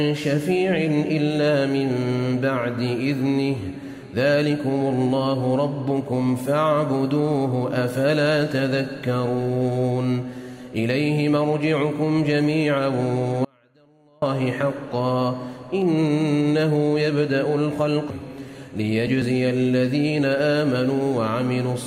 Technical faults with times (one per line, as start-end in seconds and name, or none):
13.45-14.22 audio dropout to a faint residue